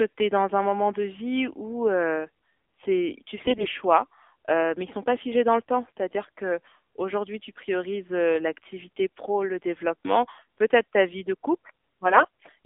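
AMR narrowband mobile codec, throughout: the speech sits in a line band of roughly 250 Hz to 3.5 kHz, with nothing above 4 kHz, and has a buzzy, synthetic edge from a pulse-driven vocal-tract model at low bit allocation, which fits AMR-NB at 7.4 kbps.

AMR bit errors, 3.40 to 3.67 s and 12.08 to 12.46 s: flipped low-priority bits, around a tenth or more, misplace the excitation pulses and skew pitch, gain and spectral detail. Pitch and level hold, but the voice turns hoarse, scratchy and gargly, suggesting about a dozen and nearly twenty corrupted frames.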